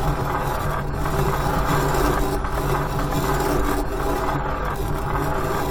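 At 1.27 s, compressed frames are skipped: roughly one 23.2 ms frame goes unplayed, so the audio jumps ahead about 20 ms.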